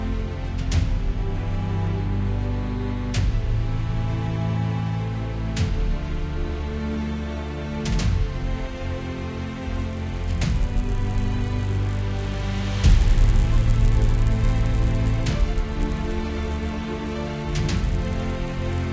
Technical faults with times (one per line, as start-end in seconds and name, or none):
9.74-18.93 resampler restarted on every block